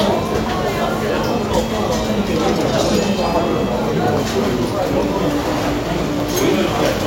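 No technical faults can be heard anywhere in this audio; the signal holds steady throughout with nothing interrupting or degrading it.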